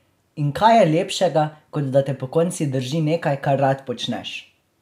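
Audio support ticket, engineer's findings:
Listened through the speech recording and nothing stood out; no audible fault to report.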